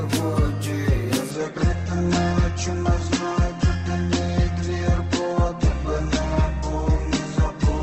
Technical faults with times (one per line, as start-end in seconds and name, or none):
1.31-7.83 adaptive stream at a lower bitrate